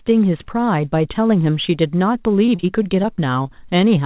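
From 2.46 s to 3.51 s the speech breaks up with repeated packet loss, giving the familiar robotic sound. Eight short holes open in that stretch, the longest about 31 ms, and roughly a seventh of the span is patched by stretching out the preceding sound. The repeated fills give a choppy texture with small pieces missing, heard through a band that stops at 4 kHz, consistent with a G.711-style call codec.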